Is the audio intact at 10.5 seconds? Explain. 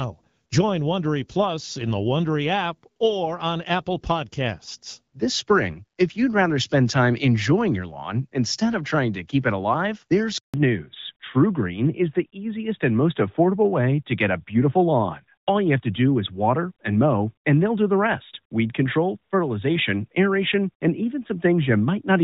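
No. At 10.5 seconds the sound falls inside a handover gap running from 10.38 to 10.54 s, about 160 ms, right after "keep it alive there's". The call was being passed from one network link to another, and no speech frames were delivered while the switch completed. The audio decays to silence within a few tens of milliseconds and stays silent until the new link carries frames again, so whatever was said in that span is lost.

From 10.54 s to the end of the clip, the call continues with a fallback to narrowband. Before the gap, the audio carries energy well above 4 kHz, consistent with AMR-WB HD Voice at around 12.65 kbit/s with only light codec damage. After it, nothing remains above 4 kHz, which points to AMR-NB at about 12.2 kbit/s. The narrower band makes the sound duller and rougher.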